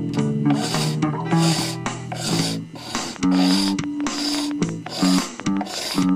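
From 2.99 s to 6.10 s, a train of clicks runs over the sound. About 5.8 clicks arrive each second, evenly spaced, around twenty in all. Each click has much the same shape. They stand roughly 10 dB above the surrounding audio, so they are heard clearly as a steady ticking. A repeated pulse like this likely comes from electrical interference from nearby equipment, or from a faulty connection or power supply.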